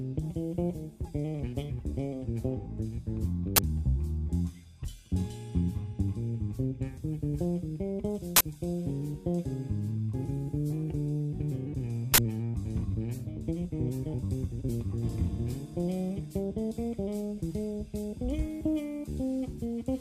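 Three short, loud bursts of digital noise cut through the sound, at 3.56 s, 8.36 s and 12.14 s. These are uninitialised buffer faults. A playback buffer was sent out before any audio had been written to it, so stale memory contents were played as samples. The first burst lasts about 21 ms, which fits a 1024-sample block. The later two last about 43 ms each, which fits 2048-sample blocks.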